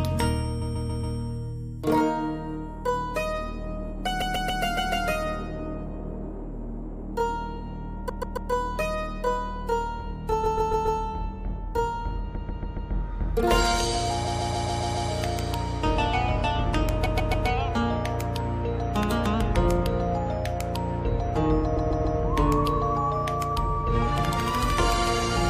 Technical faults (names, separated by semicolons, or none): repeated frames